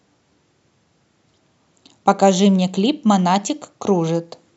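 No technical faults can be heard anywhere in the speech. At no point does the audio change in a way that marks a problem starting or stopping.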